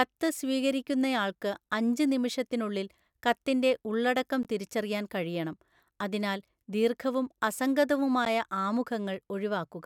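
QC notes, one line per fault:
4.43 s, block of digital silence: the output buffer was likely not filled in time, so about 16 ms of samples came out as zeros between "അഞ്ച് നിമിഷത്തിനുള്ളിൽ കത്തിൻ്റെ ഉള്ളടക്കം" and "തിരിച്ചറിയാൻ കഴിയണം അതിനാൽ ദീർഘവും". The speech drops to silence and returns with no fade, and the gap is heard as a brief pop.
8.25 s, block of digital silence: a second dropout of about 11 ms, a length that fits one missed 512-sample buffer. The abrupt cut and restart give a single sharp tick.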